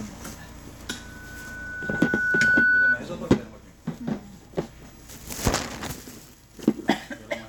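From 0.89 s to 3.04 s, a microphone is picking up the loudspeaker it feeds, and at 1.5 kHz the gain around that loop exceeds one. That single frequency reinforces itself on every pass, so a loudspeaker feedback squeal appears. It starts faintly and swells over roughly a second and a half into a piercing, steady tone that rises to about 10 dB above the rest of the sound before the squeal stops.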